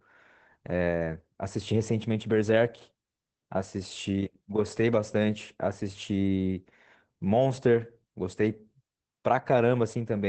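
The whole speech clip carries Opus voice compression damage: nothing sits above about 8.5 kHz, so it's dull and boxy, and the coarsely coded excitation gives a hoarse, faintly robotic edge. That fits SILK-only wideband mode at a low rate, around 12 kbps.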